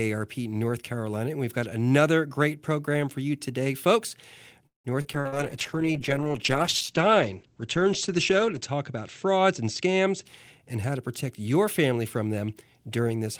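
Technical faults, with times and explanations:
4.67–5.35 s, repeated packet loss (robotic sound): four gaps in quick succession, the longest 178 ms, are patched by stretching the last sound, which makes the speech choppy. The waveform shows smeared, repetitive stretches, while the spectrogram shows flattened, smeared harmonics and about 120 ms of dropped sound.
5.16–10.32 s, call bitrate drop: the encoder codes more coarsely and its bandwidth falls from 20 kHz to 8 kHz, which fits a drop from about 32 kbps to 10 kbps. The speech sounds muffled and watery for roughly 3.5 s. On a spectrogram the energy above 8 kHz is cut off sharply.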